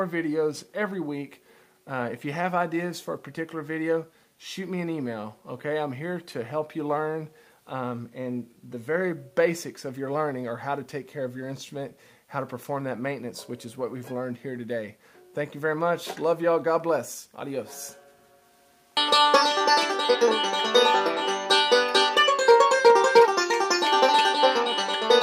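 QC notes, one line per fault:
No faults heard.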